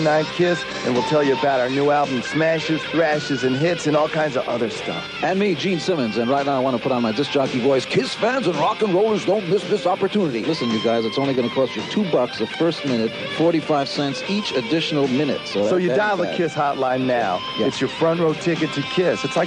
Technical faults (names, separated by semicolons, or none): none